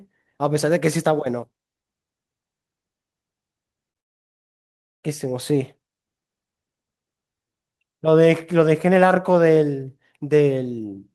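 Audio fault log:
3.91 to 3.98 s: short concealed packet loss, about 40 ms missing; the decoder extended the preceding sound for roughly 36 ms, leaving a brief smear before recovery.
3.99 to 5.06 s: long network dropout, likely cause; about 1.04 s missing, concealment fades quickly to near silence, then audio resumes with that section gone.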